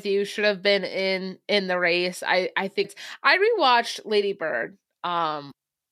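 At 2.81 to 2.86 s and again at 5.48 to 5.52 s, the speech breaks up briefly for about 44 ms, the sound of damaged data in a compressed stream. Corrupted bytes leave the decoder unable to read those frames properly, so it loses sync and hunts for the next valid header. On a spectrogram each event is a narrow vertical disturbance. The waveform shows an abrupt discontinuity there.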